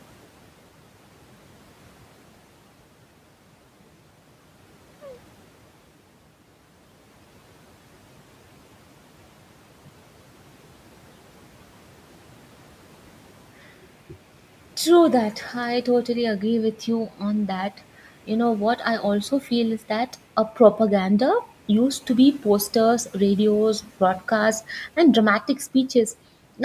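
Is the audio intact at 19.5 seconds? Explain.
No. From 19.31 to 19.49 s the speech turns faint and swallowed, dipping by about 8 dB for roughly a tenth of a second. This is speech cut by the noise suppressor, which mistook part of the speech for the room noise, about 22 dB below the speech, and turned it down.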